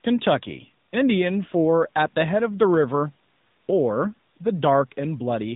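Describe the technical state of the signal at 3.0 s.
At 3.0 s the speech carries AMR narrowband mobile codec damage, present across the whole clip. Sampling at 8 kHz removes everything above 4 kHz, and the pulse-excited vocal-tract model gives the voice a plainly audible buzzy, synthetic edge, which fits a mid-rate mode around 10 kbps.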